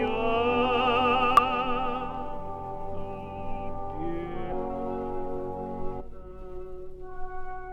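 Short glitches at 1.37–1.39 s, 4.51 s and 5.99–6.01 s come from damaged data in a compressed stream, as the decoder misreads corrupt frames.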